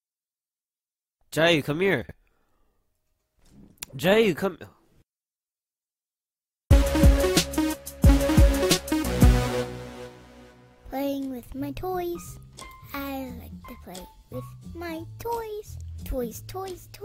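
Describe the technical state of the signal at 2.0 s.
Chunks out of order occur from 2.02 to 2.11 s. A block of about 23 ms arrived three blocks late and plays after the audio that should have followed it. No material is missing, but the sequence is scrambled, leaving three abrupt joins where mismatched edges meet. The result is a brief jumbled moment in the sound.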